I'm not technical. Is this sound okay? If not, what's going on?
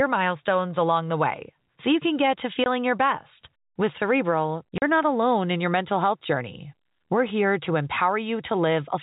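No. This speech has two brief holes from packet loss filled with silence: 2.64 to 2.66 s and 4.78 to 4.82 s. Pieces of the transmission went missing and pure silence took their place, about one and then two packets' worth. Unlike a concealed loss, which smears over gaps, these holes have hard edges.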